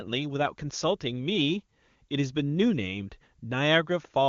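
Nothing here counts as a fault; the speech comes through the AMR wideband (HD Voice) codec at 23.85 kbit/s, a rate high enough that it sounds clear, with at most faint traces of the coding.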